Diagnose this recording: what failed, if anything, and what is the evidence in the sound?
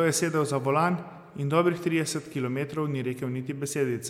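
Nothing failed; no stage shows any audible fault here.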